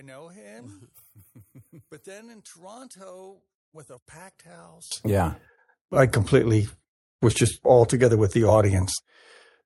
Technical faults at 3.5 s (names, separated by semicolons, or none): one channel inverted